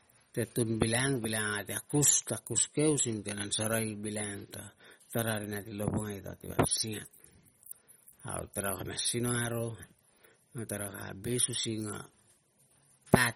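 From start to finish the speech carries plainly audible codec damage: a watery, swirling texture over the voice, with metallic chirping around s sounds and consonant attacks that smear rather than snap. Nothing is heard above 17.4 kHz. This is likely MP3 compression at a low bitrate, roughly what 32 kbps would give, where the encoder, short of bits, cuts the treble at a fixed point and lets weak frequency detail flicker in and out between frames.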